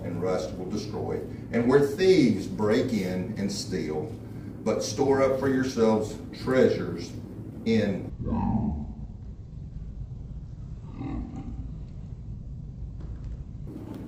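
At about 8.10 s the audio suddenly drops to half speed and a full octave lower, and it stays that way until around 13.67 s. That's the classic stereo read as mono fault. The left and right samples are interleaved, but something treated them as one long channel, so every stereo frame became two consecutive mono samples. Everything stretches out twice as long and sinks 12 semitones, with a fainter mirrored copy folded into the top half of the spectrum.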